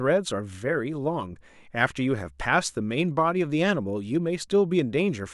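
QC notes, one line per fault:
No technical faults can be heard anywhere in the signal.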